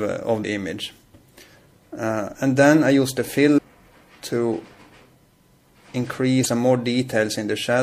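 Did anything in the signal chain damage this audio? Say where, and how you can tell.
Yes. The codec stage has left plainly audible damage throughout the clip: the top end turns watery and swirly, with chirps flickering where high content comes and goes. That is likely MP3 compression run short of bits, which fits a bitrate of around 64 kbps. The encoder zeroes weak frequency lines that switch on and off frame to frame.

Damaged data in a compressed stream shows up at 0.41 to 0.45 s, 3.54 to 3.59 s and 6.42 to 6.46 s. Each event is a short disturbance of roughly 45 ms. That pattern comes from corrupted bytes in the stored or transmitted file. The decoder misreads those frames, loses sync, and skips forward to the next valid frame header before playback settles again.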